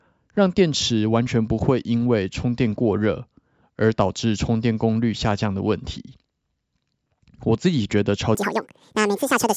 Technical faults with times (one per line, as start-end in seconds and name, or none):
8.35-9.57 wrong sample rate